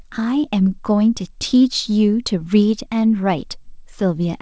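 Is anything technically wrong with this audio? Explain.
No, nothing is technically wrong.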